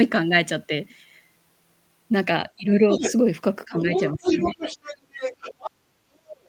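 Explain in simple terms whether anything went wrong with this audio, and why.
Several things went wrong, and they come from the same source: a call where the other person's voice was playing on a loudspeaker.

The first is speech suppressed in double talk. At 2.56 to 2.75 s, 3.65 to 3.88 s and 4.13 to 4.4 s, the speaker's voice suddenly drops to a much quieter level, then comes back. Each dip lasts only a moment. The likely cause is the echo canceller. It could not tell the speaker apart from the other person's voice, so it turned everything down.

The second is the other side's voice leaking through. A second voice can be heard at 2.92 to 3.13 s, and again for a longer stretch from 3.94 to 5.71 s. It is not much quieter than the speaker. A fainter scrap returns at 6.31 to 6.47 s. This is likely sound from the speaker's loudspeaker that the echo canceller failed to remove from the microphone.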